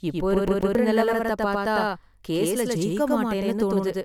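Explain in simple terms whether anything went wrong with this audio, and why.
Throughout the recording there is a doubled audio track: a second copy of the speech runs about a tenth of a second behind, at roughly the same loudness, giving an echo-like smear. The likely cause is the sound being captured twice through a slower second path.

From 0.47 to 0.75 s, just before "நிலவரத்தைப் பார்த்தா", there is a CD stuck on one turn fault. A 139 ms slice of the speech plays twice with a brief dropout at each jump, producing a quick, even stutter like a skipping disc.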